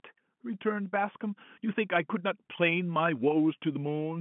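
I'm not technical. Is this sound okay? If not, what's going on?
Yes, there's nothing technically wrong here: the speech comes over ordinary telephone coding, which is why it sounds a little narrow with nothing above about 3.8 kHz, and that's simply how phone audio normally sounds.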